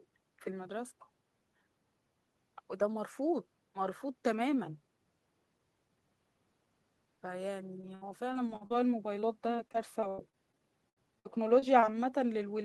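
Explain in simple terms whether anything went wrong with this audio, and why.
Repeated packet loss (robotic sound) hits the speech twice, from 7.81 to 8.72 s and again from 9.20 to 11.84 s. Small chunks of the signal never arrived in time, the longest about 64 ms in the first stretch and 96 ms in the second. Each hole was patched by carrying on the sound from just before it, and another hole followed soon after. The result is choppy speech with pieces missing.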